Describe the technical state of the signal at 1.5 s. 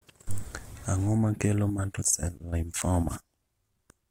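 At 1.5 s the speech signal is intact, with no audible technical fault at that moment.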